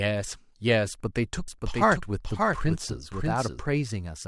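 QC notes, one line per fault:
1.48–3.60 s, doubled audio track: a second full-band copy of the speech runs about half a second behind the original, roughly 5 dB quieter, dry with no decay or room colour, and it cuts in and out abruptly at the range edges. This is likely a second capture path or an edit stacking two offset copies. On a spectrogram every harmonic pattern repeats at a fixed half-second lag, and the waveform shows overlapping envelopes with hard onset and offset.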